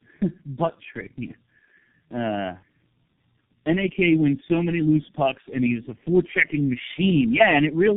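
Throughout, the speech sounds rough, muffled and warbly, with nothing above 3.6 kHz. This is tandem speech coding: the sound points to three low-rate speech codecs in a row, fitting AMR-NB twice then G.723.1, each re-encoding the previous one's damage.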